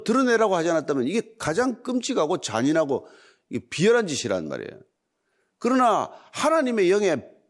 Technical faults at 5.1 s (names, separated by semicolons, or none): none